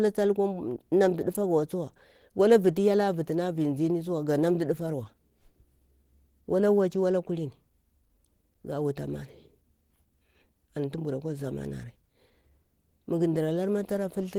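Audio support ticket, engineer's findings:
Speech hoarse, muffled, for the whole clip. Likely Opus compression in its hybrid speech mode. Damage is plainly audible and fits a low rate around 16 kbps. Top end still reaches about 20.2 kHz, so no bandwidth squeeze.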